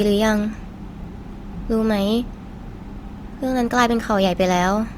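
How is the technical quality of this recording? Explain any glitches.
There is one glitch in this speech recording. At 1.04 s the sound breaks with a small jump forward where roughly 10 ms is missing. This is likely a dropped buffer (overrun): the samples were overwritten before being collected, so the audio on either side was joined directly without any gap.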